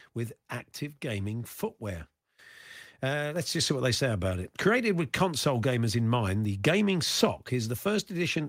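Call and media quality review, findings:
Microphone volume stepped up at 3.36 s, just before "let's just see what": call software's input-gain control raised the mic volume in one step, lifting speech and background together by about 5 dB.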